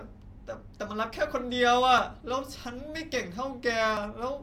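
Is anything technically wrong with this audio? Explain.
Yes. At 1.98 s and 3.97 s the speech skips forward abruptly, about 10 ms gone each time, 2 s apart, likely audio missing between chunks as recording boundaries drop a sliver.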